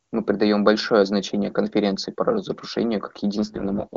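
From 3.35 s to the end, the speech turns rough, raspy and synthetic, with no gap and no loss of bandwidth. This is an AMR rate drop: the sound fits the AMR-WB codec falling from 23.85 to 6.6 kbit/s, spending bits on error protection instead.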